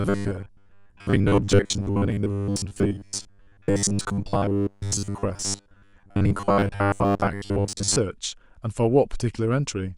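From 0.01 s to 7.98 s the speech turns into robotic sound from repeated short buffers: a rigid, metallic buzz near 100 Hz that still loosely tracks the words. The likely cause is new audio arriving too seldom, so playback keeps looping the last 10 ms or so while roughly two-thirds of the real signal is skipped. Unlike a stutter or dropout, nothing goes silent; the fixed 100 Hz pitch gives it away.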